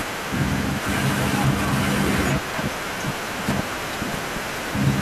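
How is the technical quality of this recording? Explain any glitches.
No glitches are audible; the only background is room noise sitting about 19 dB below the speech, which belongs to the recording space rather than the signal chain.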